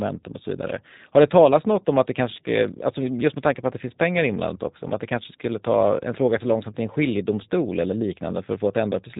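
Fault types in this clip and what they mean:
G.729 codec: The whole clip has been squeezed through a low-rate VoIP speech codec, and the roughness is plainly audible, consistent with G.729A at about 8 kbit/s. Rather than keeping the waveform, the codec resynthesises the speech from a vocal tract filter, a pitch predictor and a handful of pulses every few milliseconds. That leaves it slightly buzzy and synthetic, and the top end is gone entirely, with nothing above 3.8 kHz.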